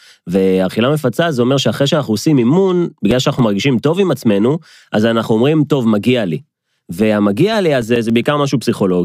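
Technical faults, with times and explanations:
2.55–3.53 s, CD scratch ticks: eight brief ticks in the speech, about eight a second and each a few milliseconds long. A scratch destroys more data than error correction can rebuild once per disc revolution.
7.54–8.24 s, CD scratch ticks: six tiny clicks, again roughly eight a second and only milliseconds long. The player interpolates or mutes the unrecoverable samples on each turn.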